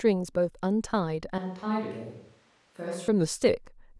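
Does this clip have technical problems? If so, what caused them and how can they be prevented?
Yes. The recording likely switched to a distant microphone from 1.38 to 3.08 s: the speech turns roomy and hollow, loses bass, drops a few decibels, and gains audible background noise. Monitoring the close microphone during recording, with a wired or redundant backup, would prevent the fallback.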